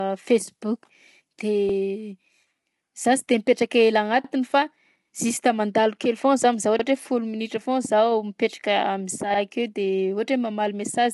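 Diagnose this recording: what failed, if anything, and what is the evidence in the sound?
The speech sounds rough and grainy throughout, with nothing above 11.5 kHz. This points to low-delay AAC compression at a low bitrate, likely around 32 kbps, at the codec stage.

At the buffer stage, overlapping chunks replay 50 ms at each 2.5 s join. Stutters occur at 1.69, 4.24, 6.79 (after "kely foa za mizaha", before "hoe folo") and 9.34 s.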